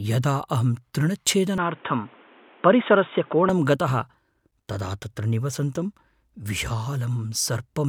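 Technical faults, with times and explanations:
1.58–3.49 s, input switched to a poorer device: the speech suddenly turns dull and boxy, with nothing above 3.8 kHz, plus a faint new hiss sitting roughly 30 dB under the voice, then clears up again at 3.49 s. There's no gap at either switch and no real level jump, just the tone and band changing. That's likely the recording jumping to a narrower-band mic or headset profile and back.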